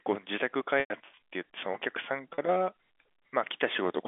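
From 0.80 to 1.00 s, packet loss with pitch repetition removes about 120 ms of the speech, scattered over 200 ms. The receiver fills each hole by repeating the last pitch period. The longest gap, 100 ms, fades toward silence before the speech cross-fades back. At 2.34 to 2.38 s a 40 ms loss is simply held, giving a brief buzzy sustain. On a spectrogram these spans show frozen, perfectly regular harmonics. The waveform shows identical repeated cycles tapering in amplitude, all within the narrow telephone band.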